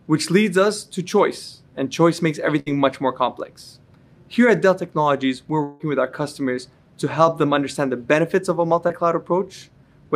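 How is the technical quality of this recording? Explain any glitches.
The recording has three network-related glitches, each a point where audio failed to arrive in time and the receiver covered the gap.

Burst of packet loss, 2.59 to 2.69 s. A run of packets went missing, about 60 ms of audio in total, and the receiver filled roughly 68 ms by extending the last sound it had while fading it down. When the real signal returns, about 7 ms more has been dropped, so the sound jumps forward. It comes across as a short held, dimming smear followed by a slight skip.

Long network dropout, 5.63 to 5.82 s. About 160 ms of audio is absent, and the gap is filled for roughly 162 ms with a stretched continuation of the preceding sound that decays rather than going silent. Nothing reaches true silence before the signal resumes further along, with the missing stretch simply gone. The cause is likely an interruption in the network connection, and it gives the longest smeared gap in the clip.

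Short concealed packet loss, 8.88 to 8.91 s. Only about 20 ms failed to arrive in time, and the receiver patched roughly 17 ms of it by carrying the previous sound forward and then blending back into the incoming audio. Because the patch is so brief, it registers as a quick smear or wobble rather than a gap, and any very short sound falling in that instant may be lost.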